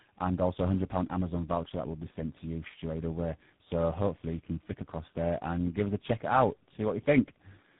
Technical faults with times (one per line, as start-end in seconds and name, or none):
0.00-7.80 tandem speech coding